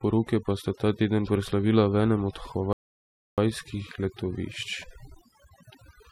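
Overdone noise removal runs through the whole speech clip. The noise reducer is set too hard, so frequency bands close to its noise estimate are pulled down or shut off, taking soft parts of the voice along. The background drops and breaks up into twinkling specks.

Mains hum enters at 1.39 s and continues to the end: a steady 60 Hz tone with some low harmonics, about 30 dB below the speech. A ground loop or nearby transformer is leaking the power line into the signal path.

A rebuffering stall from 2.73 s to 3.38 s cuts the sound to silence for 0.65 s, then picks up exactly where it stopped. The player ran out of downloaded audio and waited for more to arrive, so nothing is lost but time is added.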